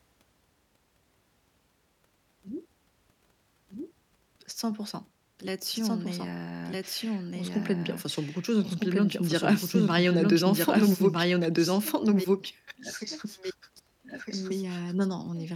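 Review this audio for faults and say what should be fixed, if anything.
A doubled audio track runs through the whole speech clip: a second full-band copy trails about one and a half seconds behind at roughly equal level, likely from a duplicate capture path or misaligned edit. Unlike echo, it never decays or gains room colour. To prevent it, route each source through a single capture path and check edits for stacked copies.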